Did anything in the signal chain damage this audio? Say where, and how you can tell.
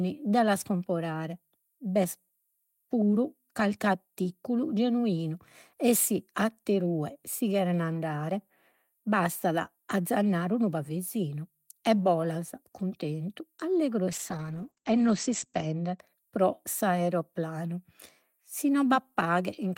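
Yes. A call bitrate drop, where network bandwidth estimation forces the codec to starve, runs from 14.13 to 16.05 s. The encoder falls from about 32 kbps to 11 kbps, holds its lowest rate for roughly 1.5 s, and the audio turns coarse and muffled. On a spectrogram, energy above 8 kHz vanishes in that window, a flat ceiling where the band was 20 kHz wide, before full bandwidth returns.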